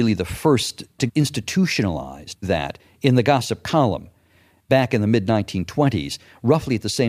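No technical faults can be heard anywhere in the recording. The speech continues without any audible break or disturbance in the signal.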